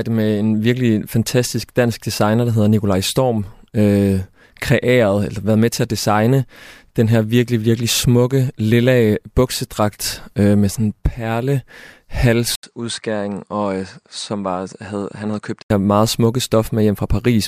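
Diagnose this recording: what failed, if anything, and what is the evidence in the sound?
The capture driver likely switched to a poorer input device from 12.55 to 15.70 s, starting just before "her meget smukke". After an 80 ms gap, the speech loses everything above 9.5 kHz, drops about 10 dB and gains the new device's noise floor, about 55 dB down.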